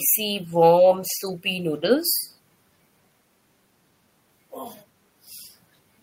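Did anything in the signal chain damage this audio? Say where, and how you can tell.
No, I can't hear damage from any stage of the chain anywhere in this speech recording.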